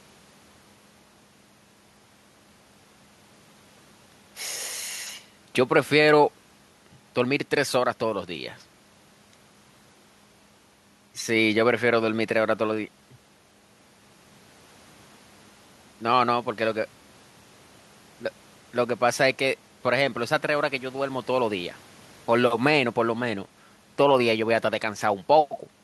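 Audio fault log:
Nothing stood out on listening to this speech recording.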